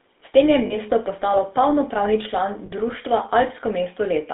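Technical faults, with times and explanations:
Throughout: GSM full-rate codec. The pulse-excited vocal-tract model gives a buzzy, gravelly roughness at what sounds like 13 kbps, in a line band of 250 Hz to 3.6 kHz.
0.66–0.77 s and 2.66–2.71 s: lost GSM frames. The first follows "tem je" and precedes "postalo polnopravni". Each gap of about 40 ms is filled by repeating the last good frame, causing a brief metallic ring.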